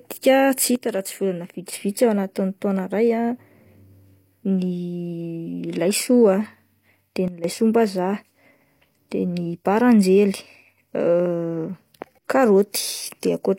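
At 0.76 s the speech and background noise drop together by about 6 dB until 1.73 s, then from 7.28 to 7.44 s by about 12 dB. These sudden gain jumps, likely from unramped gain steps, switch instantly, noise floor included, unlike a compressor's gradual attack.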